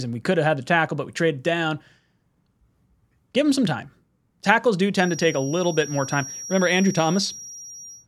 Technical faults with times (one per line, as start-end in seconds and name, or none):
4.92-8.07 feedback whistle